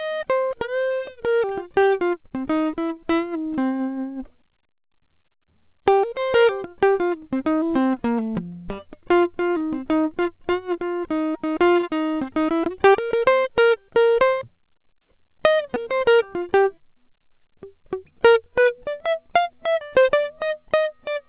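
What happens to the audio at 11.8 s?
A short concealed packet loss at 11.81 to 11.85 s: about 20 ms of the music went missing and the receiver bridged it by extending the preceding sound, leaving a brief smear rather than the silent gap of an uncovered dropout.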